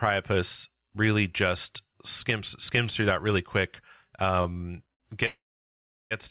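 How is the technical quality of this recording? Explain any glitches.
The speech has two network glitches near the end. The sound stops at 4 kHz, which fits narrowband G.711 A-law at 64 kbps.

Repeated stalls (stutter), 4.42 to 5.02 s: packets arrived late four times, the jitter buffer ran dry, and the receiver stretched the last sound over 136 ms in total (longest 58 ms, about 23% of that span). It sounds halting and stuttery. A spectrogram shows short smeared, repeated bands with no missing content.

Call audio freeze, 5.26 to 6.13 s: likely a delivery hold-up that emptied the buffer. The receiver continued the last sound as a brief fading buzz, then about 700 ms of silence, 848 ms inserted in all. The waveform shows a flat gap before the speech resumes where it stopped.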